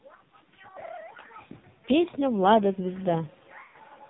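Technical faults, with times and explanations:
Throughout: AMR narrowband mobile codec. The whole clip has the flat, boxed-in sound of a 2G or 3G call, with nothing above 4 kHz. The damage is heavy. The speech comes out buzzy and synthetic, which fits one of AMR-NB's low modes, around 5.9 kbps. At that rate the codec has very few pulses per subframe to drive its vocal tract model, so the voice turns thin and robotic.
3.64 to 3.76 s: lost AMR speech frames. About 100 ms of speech went missing here, which points to a short run of frames that failed their checks on the radio link. The decoder kept repeating its last good pitch and vocal tract settings while lowering the gain. That gives a smeared, drawn-out sound that sags toward silence, and then the speech comes back a bit weak and rough.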